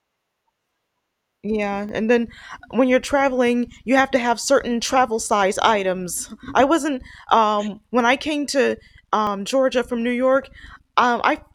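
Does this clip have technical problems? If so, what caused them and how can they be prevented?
Yes. The speech has two small forward jumps: at 1.89 s, before "and then when you're", roughly 10 ms is lost, and at 9.27 s, after "when I came to", about 30 ms. No gap is left. This is likely a dropped buffer (overrun), where the recorder missed samples before the hardware overwrote them. Prevent it with larger buffers and higher recording-thread priority.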